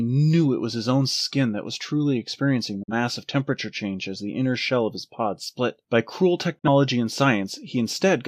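The speech fades out over about 8 ms and goes silent at 2.83 s and again at 6.58 s, about 43 ms each time, then resumes. This is a digital broadcast dropout: the receiver muted for what fits one lost or corrupted frame.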